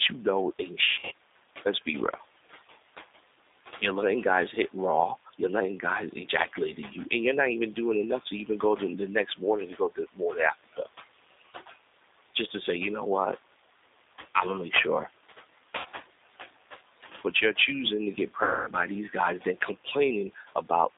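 Throughout, the speech passes through G.729 codec coding, which fits the 8 kbit/s G.729A variant. The line band runs from roughly 300 Hz to 3.7 kHz, so the top end is gone and the low end thins out. The codec rebuilds each 10 ms frame from a vocal tract model, a pitch predictor and a few pulses, and the damage is plainly audible as a rough, slightly synthetic edge on the voice.

Noise suppressor artifacts are also present for the whole clip. The room noise sits about 16 dB below the speech, and the suppressor pulls it down by about 16 dB in the gaps, frame by frame. The background therefore drops away between phrases and comes back under them.

At 0.91 to 1.13 s, just after "you know ain't", there is VoIP packet loss concealed by the speech codec. About 160 ms of audio is missing, scattered over 200 ms, with the longest gap 60 ms. The decoder fills the holes by extending its last pitch and filter at falling gain, which gives short buzzy, smeared stretches. 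Because each frame builds on the previous one, the voice stays distorted briefly after the loss ends.

From 9.57 to 10.88 s comes speech cut by the noise suppressor. The suppressor misreads parts of the speech as noise and turns them down with the background, by as much as about 19 dB. Well over half a second of this span is affected in total, and soft sounds and word endings come across as swallowed.

At 15.78 to 15.87 s, a 60 ms loss produces a brief buzzy concealment blip.

At 18.43 to 18.70 s, between "you're choosing to get" and "by these guys then", the longest loss occurs: 240 ms, which fits about twelve 20 ms packets. The concealment stretches the last sound into a fading buzz, and recovery is audibly rough.

From 20.35 to 20.70 s, the suppressor clips speech again, by up to about 10 dB over roughly 150 ms, so the sound goes briefly faint.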